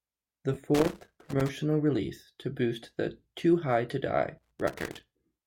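Speech with two kinds of fault. From 0.54 to 0.56 s, chunks out of order: a 10 ms block was written one slot late, so the sound briefly jumbles at the hard joins. A loose connector crackle, from a worn contact rapidly making and breaking, chops the signal into irregular scratchy bursts from 0.75 to 1.49 s, just before "release to boost the", and again from 4.38 to 5.04 s.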